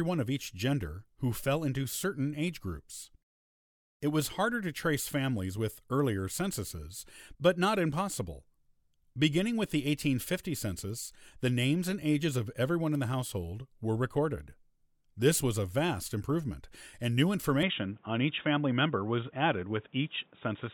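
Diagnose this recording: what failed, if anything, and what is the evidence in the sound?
At the driver level the input was likely switched to a poorer device just after "vast improvement and new", at 17.63 s. From there to the end the speech turns dull, with nothing above 3.8 kHz and new noise about 40 dB down, with no gap at the switch and no clear level jump.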